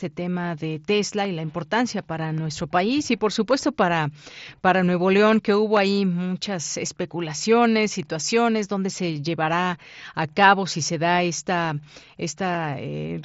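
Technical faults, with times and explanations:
Nothing stood out on listening to this speech, which carries the sound of a Bluetooth mSBC headset codec, with the band stopping a little below 8 kHz.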